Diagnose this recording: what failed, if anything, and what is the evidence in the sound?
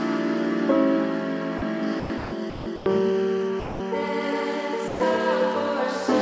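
Brief patches of flat, steady noise replace the sound at 1.58, 2.00, 2.18, 2.50, 2.76, 3.60 and 4.88 s, each 40 to 200 ms long. This is likely sound dropped by the voice detector during call processing: the sender took those moments for background and stopped sending, so the receiver substituted comfort noise.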